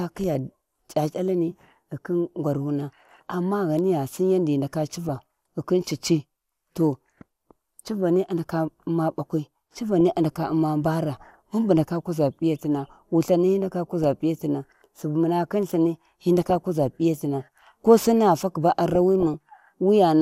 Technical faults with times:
5.05-5.20 DAB burbling
10.00-10.12 DAB burbling
14.03-14.06 DAB burbling
16.41-16.55 DAB burbling
18.93-19.34 DAB burbling

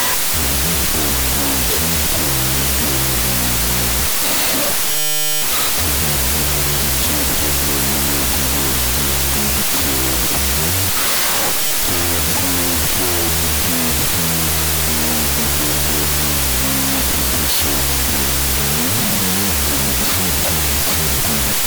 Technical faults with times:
0.00-21.66 wrong sample width

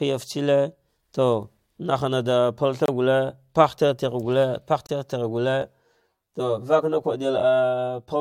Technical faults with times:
2.86-2.88 gap between stream segments
4.87-4.89 gap between stream segments
5.62-8.20 channel delay (comb filtering)

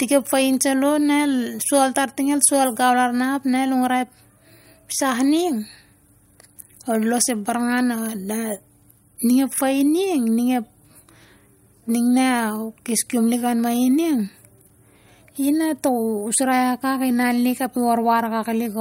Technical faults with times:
none

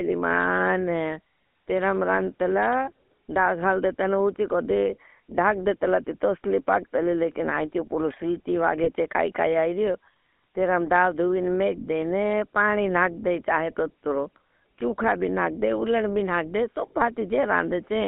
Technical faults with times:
0.00-18.07 GSM full-rate codec
8.84-8.89 lost GSM frames
14.81 electrical switching spike

